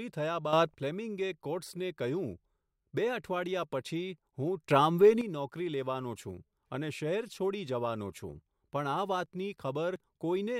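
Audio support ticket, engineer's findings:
Sudden gain jump at 0.53–0.75 s and 4.70–5.21 s. Digital gain stage likely applying a new setting with no ramp, so level steps up by about 9 dB between adjacent samples. Speech and background noise rise together, abruptly, then drop back at each end point. Second event longer, roughly half a second. Check gain automation or bit-shift scaling for missing smoothing.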